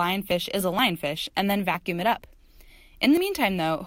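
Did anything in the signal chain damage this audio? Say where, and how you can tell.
Yes, audio missing between chunks: roughly 20 ms skips every half second, at 0.31, 0.79, 1.27, 1.74, 2.22, 2.70 and 3.17 s, likely lost at each buffer handover.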